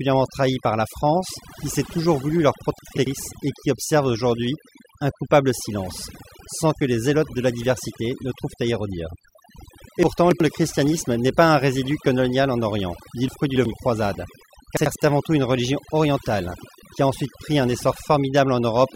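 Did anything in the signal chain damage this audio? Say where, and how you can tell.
Yes. Overdone noise removal in the call-processing stage affects the whole clip. Between pauses the floor drops to near silence dotted with twinkling specks, and quieter components of the speech are cut along with the noise. On a spectrogram the background shows scattered isolated bins in an otherwise black field, and the harmonics of the speech have ragged holes wherever they dip close to the estimated noise level.

There are also four cases of chunks out of order, from the buffer or storage stage, at 2.79–3.07 s, 10.03–10.40 s, 13.28–13.65 s and 14.77–14.95 s. Each one is a brief jumbled stretch. The blocks are about 93 ms long, and one block plays one, two or three slots late. On the waveform each event shows three hard discontinuities where mismatched segments butt together. On a spectrogram these appear as vertical broadband lines, with speech patterns that jump rather than flow.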